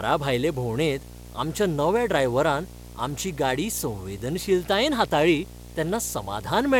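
A speech recording with video or display buzz running through the whole clip. A 60 Hz buzz sits under the speech, with a gritty hash above it. It is roughly 20 dB below the speech. A screen or video cable is coupling its picture field rate into the audio.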